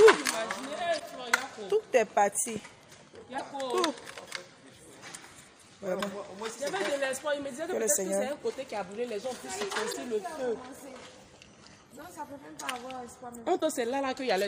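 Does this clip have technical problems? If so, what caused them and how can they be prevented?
Yes: damaged data in a compressed stream gives brief glitches at 0.96–1.01, 3.36–3.41, 5.97–6.01, 9.89–9.95 and 13.57–13.63 s. The decoder misreads corrupt frames and resyncs. Checksummed transport and verified storage prevent it.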